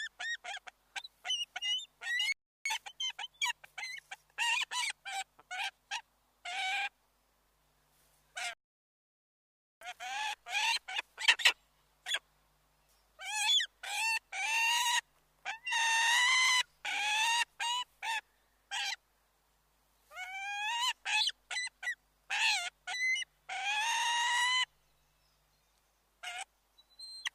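The sound cuts out abruptly at 2.32 s and again at 8.53 s, falling silent for about 0.33 s and then about 1.28 s before resuming. These are playback stalls, likely the player running short of data or its output thread being blocked until it recovered.

Each gap is followed by time-compressed catch-up: from 2.65 to 3.31 s the audio runs at 1.5 times normal speed, and from 9.81 to 11.07 s at twice normal speed. The pitch holds steady but the sound is audibly hurried, from the player trimming and cross-fading short pieces to clear its backlog.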